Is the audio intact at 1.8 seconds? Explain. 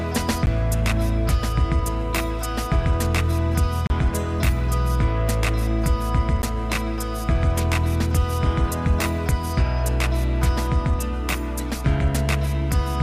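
Yes, the audio is intact at 1.8 seconds, with no dropout, click, distortion or other fault at that point.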